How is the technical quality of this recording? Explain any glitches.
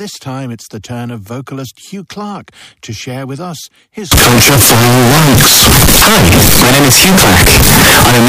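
Not great: the second half is wrecked. From 4.12 s, right after "share with us his", to the end, the speech turns into very loud, harsh distortion, with quiet gaps blasting as hard as everything else. That's likely a signed and unsigned mix-up on the 16-bit samples: the top bit flips, so every zero crossing jumps across the full range.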